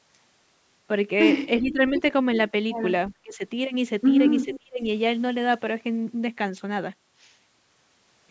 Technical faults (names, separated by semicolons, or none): speech suppressed in double talk; echo leak